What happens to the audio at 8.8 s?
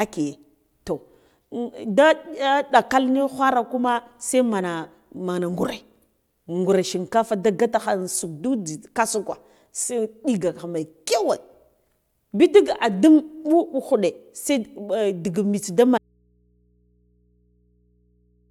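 Nothing goes wrong at 8.8 s: the speech runs on cleanly through that moment, with no dropout, click, distortion or other fault to be heard.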